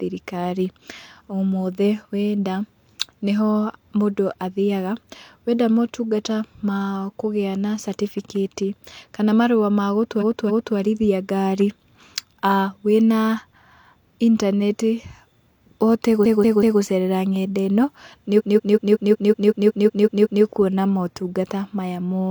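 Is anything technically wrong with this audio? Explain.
Yes. Repeated frames occur at 10.17–10.73 s, after "catibikati kana marũa ma", where a 0.28 s block plays twice more. At 16.21–16.77 s, before "gũcerera ng'enda ĩno nĩ", a 0.19 s block plays three extra times. At 18.35–20.39 s, after "gũcerera ng'enda ĩno nĩ", a 0.19 s block repeats eleven more times. In each case a short run of compressed frames was duplicated, so the decoder replays the same slice of speech. This produces a stutter and lengthens the audio by about 3.2 s in total.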